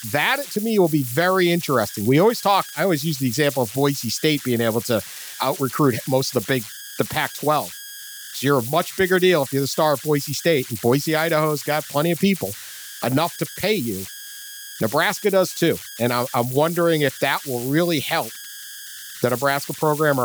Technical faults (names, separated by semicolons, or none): converter idle tones